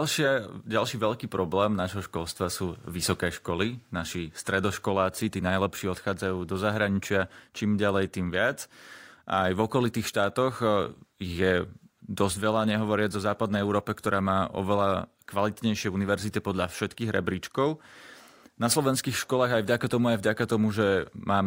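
No technical faults can be heard anywhere in the recording.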